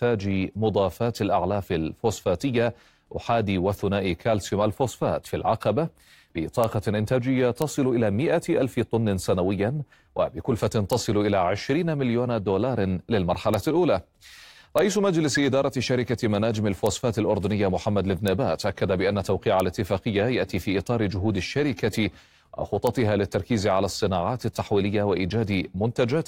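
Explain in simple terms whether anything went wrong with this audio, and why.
Yes, something went wrong: integer overflow. In this speech recording, the loudest moments pushed the signal past the biggest number the system could store, and instead of stopping at that ceiling the values wrapped around to the opposite extreme. Each time, you hear a sudden violent crack, harsher than ordinary clipping distortion. It happens eight times: at 6.64, 7.62, 10.93, 13.54, 14.79, 16.87, 18.28 and 19.60 seconds.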